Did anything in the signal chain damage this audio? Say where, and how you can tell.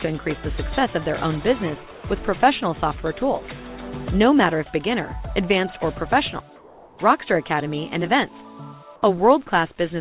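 Yes. Call processing likely halted transmission in pauses, leaving comfort noise in place of the background at 1.91–2.03 s and 6.56–6.98 s: featureless and about 2–3 dB quieter.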